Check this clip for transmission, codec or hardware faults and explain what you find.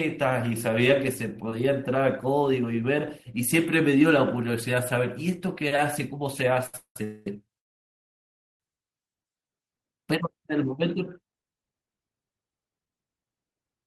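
Several network-delay faults cluster in the middle of this speech clip, with nothing actually lost.

A short stall from a late packet at 6.66–6.74 s holds the last sound for 71 ms while the jitter buffer waits. Unlike a freeze, it stays brief, with no fade to silence.

A call audio freeze occurs at 6.76–6.97 s, 7.04–7.27 s and 7.59–8.61 s. These are likely caused by packets held in transit, emptying the buffer. The held sound fades out, with about 90 ms of silence in the first freeze and nearly a full second of silence in the last. The speech then resumes where it stopped, so these are inserted gaps, not dropouts.

A jitter buffer slow-down at 9.23–9.78 s repeats pitch periods to rebuild the buffer's reserve, adding 82 ms. The speech plays at 86% speed but keeps its pitch, which distinguishes it from a tape-style slowdown.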